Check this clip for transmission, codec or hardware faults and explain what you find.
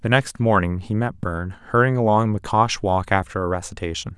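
One fault is present in this speech clip: a single loud pop from 1.23 to 1.26 s. A sudden voltage step or spike, likely from a plug being seated, a switch, a static discharge or a driver glitch, entered the signal chain and was shaped by the following circuitry into a short pulse. It is heard as one sharp pop, peaking a few decibels above the speech, lasting about a fortieth of a second, with the speech continuing beneath it.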